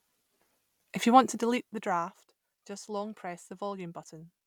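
No technical faults are audible.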